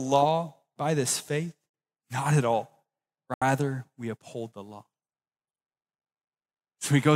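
A Bluetooth stall, likely from interference delaying packets until the headphones' buffer emptied, pauses playback twice: the speech drops to silence from 1.69 to 1.74 s (45 ms) and from 3.34 to 3.42 s (77 ms), then resumes.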